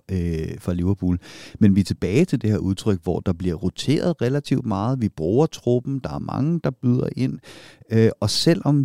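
No technical faults can be heard anywhere in the speech recording; the signal stays continuous and steady throughout.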